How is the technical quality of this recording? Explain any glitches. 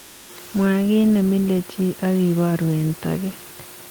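There is one glitch, at the very start. From 0 to 0.29 s the background is comfort noise: steady, featureless hiss, about 3 dB quieter than the room noise that follows, likely from discontinuous transmission filling a pause.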